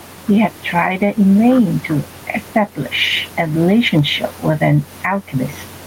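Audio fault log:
throughout gain pumping: likely gain set too high with a fast limiter; gain swings about 10 dB, pulled down on each loud sound.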